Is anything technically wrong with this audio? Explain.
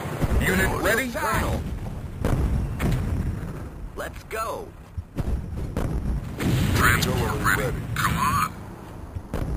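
Yes. Throughout, there is imaging from sample-and-hold upsampling. Each sample was repeated with no smoothing filter, which fits a jump from 11 kHz to 44.1 kHz. Mirrored spectral copies, the lowest spanning 5.51–11.03 kHz at about 17 dB below the signal, add a bright metallic fizz that tracks the sound's level.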